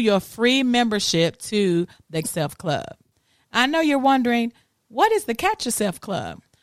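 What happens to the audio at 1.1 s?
Nothing goes wrong at 1.1 s; the speech continues cleanly through that moment, with no dropout, click or other fault.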